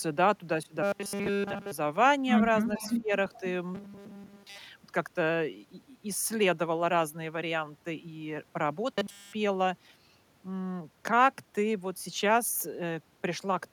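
A speech recording carries three kinds of fault. From 0.83 to 1.72 s, 3.75 to 4.58 s and 8.94 to 9.33 s the voice turns into a rigid metallic buzz at 200 Hz. This is robotic sound from repeated short buffers, likely 5 ms chunks looped while new audio failed to arrive. The first and last stretches are fully replaced, and the middle one is mostly replaced. Between 2.72 and 2.95 s, and faintly again at 3.33 to 3.41 s, a copy of the voice trails 418 ms behind, roughly 15 dB down at first and much quieter the second time. That is an echo leak, likely from a far-end loudspeaker that its echo canceller did not fully remove. Overlapping this, from 2.79 to 3.11 s, the voice dips by as much as about 15 dB in short pieces totalling around 150 ms, which is speech suppressed in double talk as the canceller likely turned down its own talker along with the loudspeaker echo.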